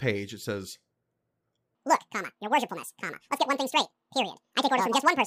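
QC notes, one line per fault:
1.75 s to the end: section at the wrong speed. From 1.75 s the speech abruptly turns high and hurried, running at 1.99 times its proper rate, with pitch rising by roughly ten semitones alongside the tempo so that the speaker sounds thin and chipmunk-like. Because speed and pitch shift together at a single moment, the likely cause is a section replayed or edited against the wrong clock, running nearly twice as fast as the recording.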